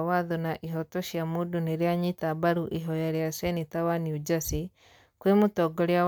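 No technical faults can be heard anywhere here.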